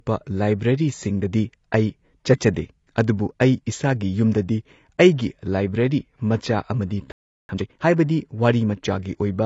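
AAC compression runs through the whole clip and is plainly audible. The speech sounds dull and smeared, with a warbling, fizzy texture on sibilants. This likely comes from AAC-LC coding at a low bitrate, consistent with about 24 kbps, where coarse quantisation and a lowered cut-off strip and blur detail.

A playback stall at 7.12 s stops the speech mid-flow, leaving 0.37 s of silence until 7.49 s. The player likely ran out of buffered data or had its thread blocked, so output went dead until it recovered.

Time-compressed catch-up follows from 7.49 to 7.85 s. To clear the backlog, the player removes small pieces and cross-fades what remains, so the speech runs at twice normal speed at unchanged pitch, sounding hurried.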